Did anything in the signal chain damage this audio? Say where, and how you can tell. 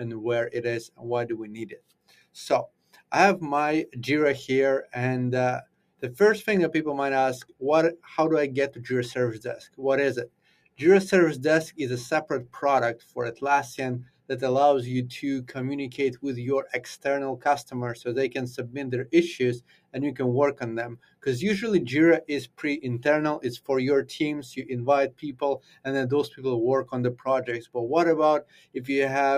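Yes. The damage happens at the call-processing stage. A noise suppressor built for speech has been left on, and this is the noise suppressor applied to music or sounds. It runs through the whole clip. The level swings by around 10 dB as the suppressor opens and closes. It treats steady, non-speech content as background noise and pulls it down, so the sound pumps and thins instead of holding a stable level.

The same stage also causes distinct dips, where sound is cut by the noise suppressor. These fall at 0.88 to 6.02 s, 7.44 to 8.05 s, 9.68 to 10.8 s, 12.98 to 14.29 s, 19.6 to 19.95 s, 20.96 to 21.26 s, and from 24.62 s to the end. In each window the level drops by up to about 18 dB. The suppressor judged those passages to be noise and attenuated them harder. The first window loses roughly two seconds in total.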